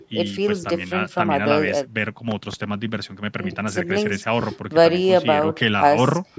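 A voltage pulse, likely from a plug, switch or static discharge, enters the signal: a loud pop, two sharp thumps between 2.31 and 2.56 s, then one at 4.41 to 4.44 s, about 10 dB above the speech.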